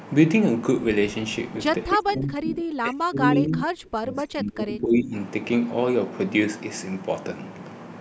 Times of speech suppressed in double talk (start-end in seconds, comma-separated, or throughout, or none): 1.90-5.13